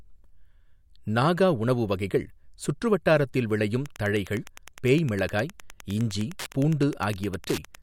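A nearby Wi-Fi radio begins coupling into the audio circuit at 3.81 s, just after "உணவு வகைகள் சுற்று வட்டாரத்தில்", and the circuit rectifies its transmissions. This Wi-Fi interference persists until the end of the clip. Each beacon, sent every 102.4 ms, becomes a small click, so the speech carries a steady ticking just under ten times a second. The ticking sits roughly 20 dB below the speech.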